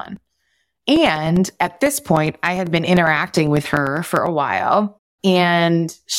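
Speech with periodic USB or driver dropouts from 0.06 to 4.27 s: roughly 2 ms gaps of silence every 0.1 s, heard as evenly spaced ticks only under signal. Unlike random network packet loss, the strict ten-per-second rhythm points to a background task stalling the bus or driver.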